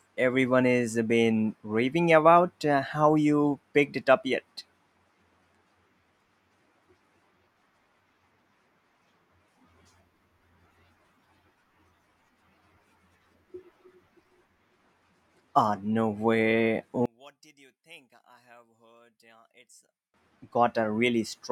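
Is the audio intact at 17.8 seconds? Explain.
No. Right after "no way", from 17.06 to 20.14 s, the speech drops by about 33 dB to a faint residue. The likely cause is one channel inverted: reversed polarity on one side cancels the shared centre content when the channels sum to mono.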